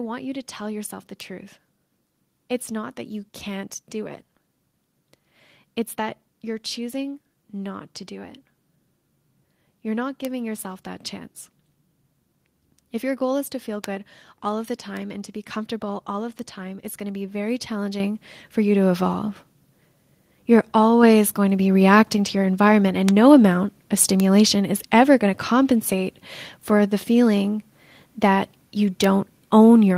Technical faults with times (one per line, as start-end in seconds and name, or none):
1.20 bit error spike
10.25 bit error spike
13.84 bit error spike
14.97 bit error spike
16.39 bit error spike
18.00 microphone volume stepped up
21.03 microphone volume stepped up
23.09 bit error spike
24.20 bit error spike
29.04 bit error spike